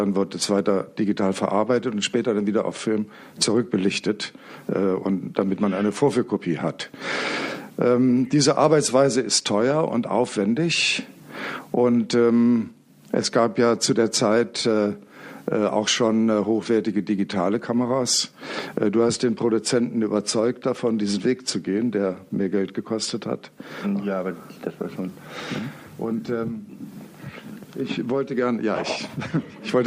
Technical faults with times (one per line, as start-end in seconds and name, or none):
0.00-29.86 clock drift between sender and receiver
0.09-29.77 repeated timing corrections